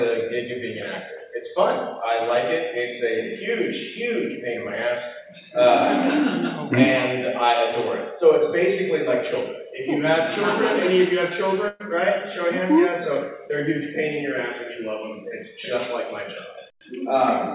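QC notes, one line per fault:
11.68–11.82 s, burst of packet loss: about 120 ms of consecutive packets arrived too late or not at all. The receiver stretched the preceding sound for 116 ms while fading it, so it smears and dims, then skips ahead past the missing stretch.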